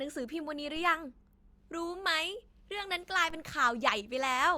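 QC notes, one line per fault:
0.77–3.30 s, DC step: the signal's zero reference jumps away from centre at 0.77 s, as happens when a converter recalibrates or an input carrying an offset is switched into the path, then holds that shifted baseline until it steps back at 3.30 s. Each abrupt baseline shift is a sudden low-frequency transient, heard as a dull thump or click at both moments, while the speech itself carries on unchanged throughout the offset stretch.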